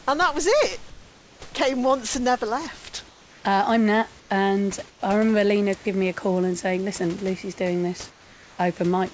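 In the pauses at 0.90–1.42 s, 3.08–3.44 s, 4.20–4.30 s, 4.90–5.02 s and 8.10–8.58 s, the room background gives way to smooth, featureless hiss about 3 to 8 dB quieter, likely comfort noise in place of the background from discontinuous transmission. Unlike a noise gate, the gaps never fall silent.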